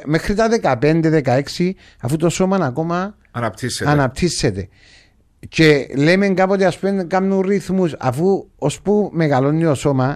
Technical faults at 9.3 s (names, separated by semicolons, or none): none